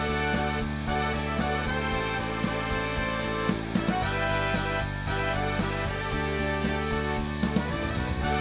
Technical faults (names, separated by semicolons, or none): none